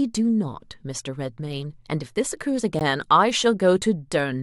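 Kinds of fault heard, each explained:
Gap between stream segments: At 2.79 s the speech drops out for a brief hole of about 16 ms, cut in and out with hard edges so it reads as a tiny click-like break rather than a fade. It sits where one 2-second segment meets the next: their time stamps leave a small stretch uncovered, and the player fills that stretch with silence. Nothing is actually missing; the sound just resumes slightly later.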